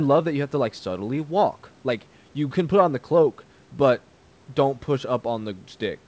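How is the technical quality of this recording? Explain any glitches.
No glitches can be heard anywhere in this recording.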